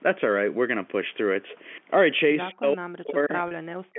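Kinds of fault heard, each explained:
Speech suppressed in double talk: From 2.5 s to the end, the speech drops sharply, by about 40 dB at its deepest, for roughly a second and a half. The likely cause is an echo canceller that, with both sides talking at once, could not separate the near talker from loudspeaker echo and turned everything down. On a waveform the envelope collapses toward the noise floor, and a spectrogram shows harmonics and upper frequencies thinning or vanishing in patches.
Packet loss with pitch repetition: At 3.48 s a 30 ms gap, which fits one lost packet, is bridged by repeating the last pitch period. Instead of a dropout or click, it sounds like a brief held, slightly buzzy tone. A spectrogram shows flat, unchanging harmonic lines across those 30 ms, and the waveform shows identical cycles repeated back to back, sitting inside the already suppressed stretch near the end.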